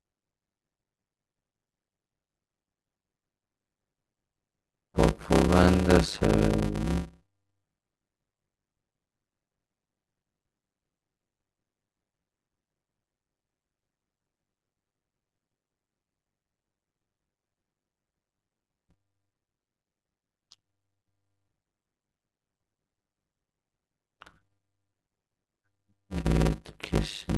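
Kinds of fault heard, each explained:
Block size mismatch (padded): each 256-sample write is zero-filled to a longer read block, adding gaps that buzz at 100 Hz and slow the speech to 0.533×.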